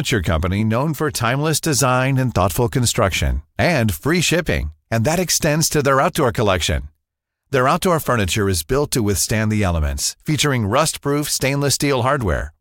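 No technical faults can be heard anywhere in the speech recording, and the signal holds steady throughout.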